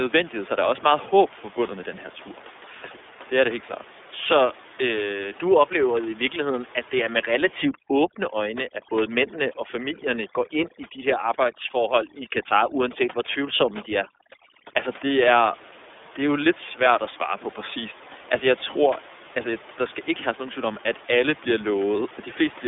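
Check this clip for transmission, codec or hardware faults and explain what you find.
Two faults are present: codec damage throughout, and an overdone noise removal pass in the middle.

The iLBC codec runs through the whole speech clip. This narrowband VoIP coder rebuilds the excitation of each 30 ms frame independently of the frame before, so small discontinuities build into a rough, slightly synthetic grain that is plainly audible. The line band sits at roughly 300 Hz to 3.6 kHz and nothing passes above 3.8 kHz, leaving the voice dull and telephone-like. The coding quality fits iLBC's 13.33 kbps mode.

Overdone noise removal affects 7.62 to 14.77 s. A noise reduction stage pushed too hard drives individual frequency bands toward zero whenever they come close to its noise estimate, taking quieter parts of the voice with them. The room noise, about 21 dB below the speech, drops here and breaks up into twinkling artefacts.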